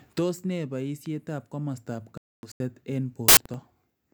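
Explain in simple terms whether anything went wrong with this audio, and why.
Three separate things go wrong in this speech clip.

First, a loud pop at 1.06 to 1.08 s: one sharp click, louder than the speech around it, while the talking carries on underneath. It's likely a sudden electrical jolt, like a plug, switch or static discharge, landing on the signal.

Next, a corrupt frame muted at 2.18 to 2.60 s. The sound abruptly drops to dead silence for about 0.4 s. Some chunks of the compressed file got damaged, the player refused them and filled the gap with nothing. The length fits roughly five frames.

Last, a corrupt FLAC frame from 3.28 to 3.60 s. Instead of silence, the damaged stretch plays back as loud errors. The damaged data was decoded anyway, so the decoder's predictions went haywire until clean data resumed. That fits about four bad frames.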